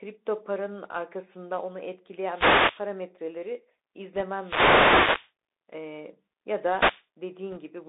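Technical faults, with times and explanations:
Throughout: Bluetooth CVSD headset codec. The speech passes through a narrowband line of about 300 Hz to 3.7 kHz, so nothing above 4 kHz survives. Each sample is coded as one up-or-down bit, and the adaptive step lags loud high sounds. The s sounds turn scratchy, and a granular hiss sits under the voice.
2.27–2.86 s, 4.36–5.32 s, 6.68–7.05 s: wireless microphone noise hit. Three swishes of static rise over the speech. These fit an FM radio microphone whose signal fades as reflections cancel. Receiver noise then swells, and in the deeper fades it breaks into crackle. The middle hit lasts nearly a second.
4.17–4.21 s and 7.52–7.58 s: bit errors on a Bluetooth voice link. Two brief rushes of crackly noise mark flipped bits on the headset link, at an error rate of roughly one percent or less. Each bit moves the signal by only one small step, so the errors fade quickly and give no loud clicks.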